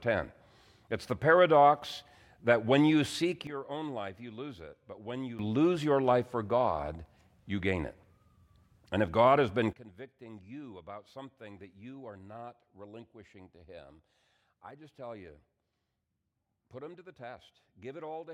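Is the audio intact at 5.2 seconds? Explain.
No. From 3.47 to 5.39 s, just after "that when you seek", a sudden gain jump likely stepped the digital gain down by about 12 dB with no ramp, so the speech and background noise drop together abruptly, returning before "lose your life for".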